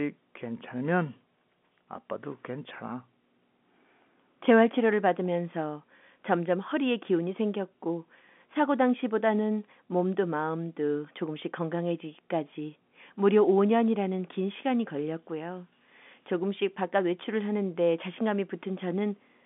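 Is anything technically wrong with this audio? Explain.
No, the speech sits in an ordinary G.711 telephone channel, with a line band of roughly 200 Hz to 3.5 kHz and nothing above 3.8 kHz, as that format's narrow bandwidth dictates.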